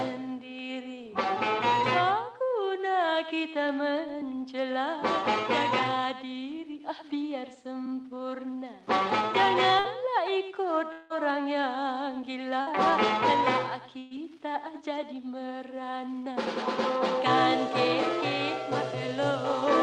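At 9.79 s a burst of packet loss begins. About 60 ms of audio never arrived, and the receiver covered the hole by continuing the last sound for roughly 50 ms and turning it down, so a short fading buzz or hiss runs to 9.87 s before the audio picks up further along. The same brief smear recurs at 12.61 to 12.70 s, again about 50 ms of fill over 60 ms lost.

From 10.92 to 11.25 s the gap is longer, likely a network dropout. About 180 ms of audio is missing, and the concealment stretches the last sound for roughly 170 ms. That held tone lasts several times longer than the 50 ms bursts, yet never reaches silence before the audio returns, and about 17 ms is added.

At 13.99 to 14.14 s a larger burst of packet loss removes about 120 ms. Concealment fills all of it with a decaying buzz or hiss, with no silent stretch, so it sits between the short bursts and the dropout in length.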